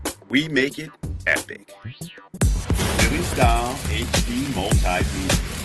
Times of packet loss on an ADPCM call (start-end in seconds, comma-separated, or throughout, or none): none